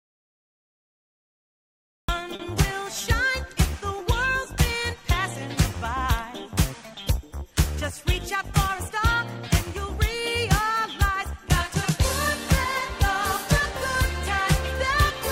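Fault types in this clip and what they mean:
Audio dropout to silence: The clip opens in silence that is already under way at the start and lasts until about 2.09 s, when the sound begins abruptly mid-flow. The likely cause is a lost input, such as a disconnected device, a failed link or a mute, while the recorder kept writing zeros. The waveform is a flat line and the spectrogram is empty, with no room tone, before a hard vertical onset.
Short stall from a late packet: Between about 2.35 and 2.41 s, one sound is held for 40 ms longer than it should be. A packet arrived late, the jitter buffer ran dry, and the receiver stretched the last audio until the data came, then resumed where it left off. Nothing is lost, but playback now runs 40 ms further behind. On a spectrogram the spectral pattern smears horizontally. The waveform shows repeated, slightly dipping cycles.
Jitter buffer speed-up: From about 8.02 to 9.15 s, the audio plays roughly 3% fast at unchanged pitch. 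The receiver was holding more buffered audio than its target, so it cut out many short pitch-period-sized pieces, a few tens of milliseconds in total, to bring the delay down. The waveform shows periodic cycles spliced out without breaks, and the spectrogram shows events packed a little closer together, with harmonics staying at the same frequencies.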